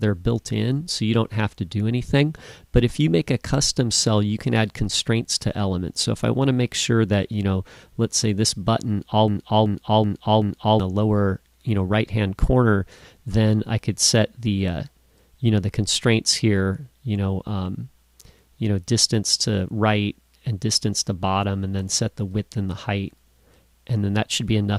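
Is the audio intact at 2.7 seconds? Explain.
Yes, the audio is intact at 2.7 seconds, with no dropout, click, distortion or other fault at that moment.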